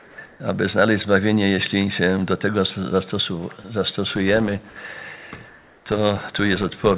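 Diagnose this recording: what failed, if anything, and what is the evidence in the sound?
Comfort noise in place of the background appears at 0.00–0.18 s, 0.26–0.40 s and 5.48–5.86 s. In each span the quiet background, sitting about 25 to 32 dB below the loud passages, turns into a flat, featureless hiss. The first span drops about 5 dB. The others shift by only about 1 dB. The stage is call processing. The likely cause is discontinuous transmission: the sender went silent in pauses, and the receiver synthesised noise of the kind defined in RFC 3389.

A filter restarted on every block produces a steady 100 Hz buzz from 4.1 s to the end, with its level tracking the signal. That rate fits 10 ms processing blocks. The stage is call processing or the driver/buffer layer. Some filter in the chain is discarding its state at each block boundary and starting from zero, so every block opens with a small transient. 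Those repeated transients form the buzz, heard through a call path that carries nothing above 4 kHz.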